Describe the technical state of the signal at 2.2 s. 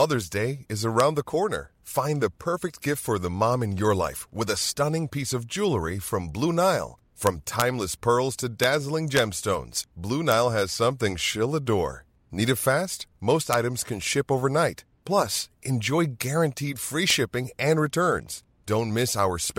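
At 2.2 s the speech signal is intact, with no dropout, clipping, glitch or other audible fault at that point.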